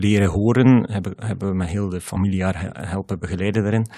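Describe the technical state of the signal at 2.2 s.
Right around there, just before 2.2 s, there's a spot of damaged data in the compressed stream, running from about 2.13 to 2.17 s. A small chunk of the encoded speech got corrupted, so the decoder couldn't make sense of those frames, lost its sync, and had to hunt for the next valid frame header before picking up again. What you hear is a short, sharp blip or squawk cutting into the speech for those 40 ms or so.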